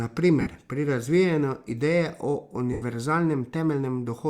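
Around 0.41 s, just before "pri razvijanju", you get a burst of lost LE Audio frames, roughly 50 ms where the decoder had nothing and kept replaying the last spectrum with scrambled signs, so the speech smears into a brief noisy hiss. At 2.73 s it happens again for about 90 ms, long enough that the concealment starts fading, and the smear sinks toward silence. The lengths fit runs of 7.5 ms frames. The light lossy compression is barely audible.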